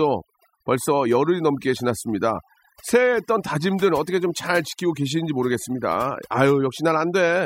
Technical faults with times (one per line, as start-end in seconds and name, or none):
0.00-7.45 overdone noise removal